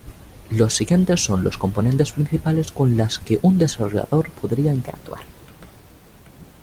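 At 4.86 s the speech jumps into a section at the wrong speed that runs to the end of the clip. It plays 1.22 times faster than recorded, so pitch rises by about three semitones and syllables sound clipped and hurried. The likely cause is a playback or edit clock mismatch for that segment. On a spectrogram, harmonics and formants step abruptly upward by roughly a minor third, with events packed closer together. The waveform shows shorter, tighter syllable envelopes.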